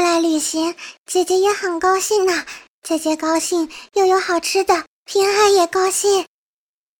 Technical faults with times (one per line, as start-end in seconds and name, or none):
3.36 corrupt frame decoded